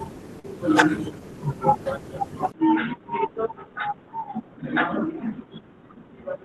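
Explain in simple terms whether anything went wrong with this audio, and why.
Two things go wrong in this speech clip.

At 0.39 to 0.45 s there is a short concealed packet loss. About 40 milliseconds of the call arrived too late. The receiver patched the hole by stretching the sound just before it, so you hear a brief smear or wobble.

From 2.52 s to the end, the voice suddenly turns dull and boxy. Nothing above about 3.8 kHz gets through. It also gets noticeably quieter, with faint new background noise and a tiny 20-millisecond gap at the change. This is likely an input switched to a poorer device, such as a headset.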